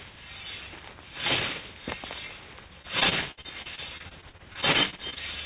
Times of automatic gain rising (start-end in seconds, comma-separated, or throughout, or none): none